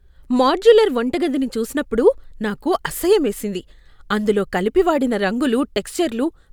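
No technical faults can be heard anywhere in the recording.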